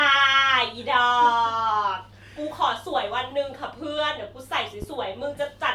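At 4.82 s a single loud pop lands on the speech and is gone by 4.86 s. It is a sharp, brief thump that peaks a few decibels above the speech around it. The speech carries on underneath without a break. The likely cause is a sudden voltage step or pulse entering the signal path, from a plug, a switch, static or a driver glitch. The circuits downstream shaped that pulse into the short burst heard here.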